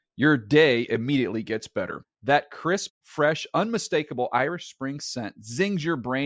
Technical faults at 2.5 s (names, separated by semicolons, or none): none